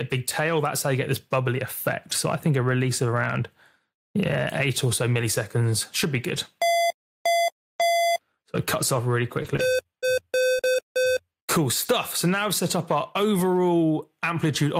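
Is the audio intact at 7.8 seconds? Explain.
No. From 7.79 to 7.81 s, a lost packet rebuilt from error correction fills 20 ms with a coarse low-bitrate copy. The waveform has no gap, but the spectrogram shows a brief, noisier, smeared strip.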